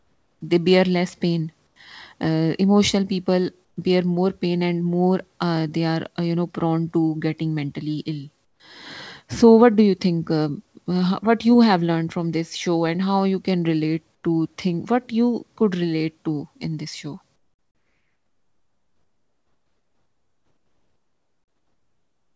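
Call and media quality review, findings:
Comfort noise in place of the background: likely discontinuous transmission on the sender, with the voice detector halting audio in pauses and the receiver filling in synthetic noise. At 0–0.41 s, 1.67–1.76 s, 3.65–3.77 s, 8.45–8.60 s, 14.15–14.24 s and 17.36 s to the end (5.0 s), the real background, sitting about 45–48 dB under the loudest passages, becomes a smoother, featureless noise, about 6 dB quieter, or about 10 dB quieter at 8.45 s and in the final stretch.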